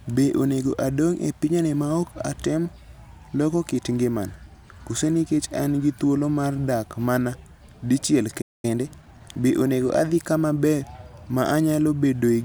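At 8.41 s, just after "mar dak mana dichiel", the speech cuts to silence for about 0.22 s in a playback stall, likely because the player starved of data or its thread was blocked. Unlike a dropout, nothing is skipped. The sentence resumes exactly where it broke off.

From 8.65 s to 9.53 s comes time-compressed catch-up. The player trims its backlog by splicing out and cross-fading short slices, so the speech runs about 1.25 times fast until "onego adhi kama ber". It keeps its normal pitch, unlike a sped-up resample.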